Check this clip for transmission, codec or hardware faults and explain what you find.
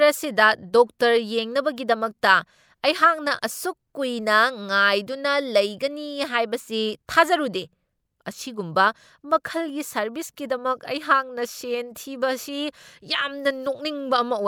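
No faults found; nothing in the speech needs flagging.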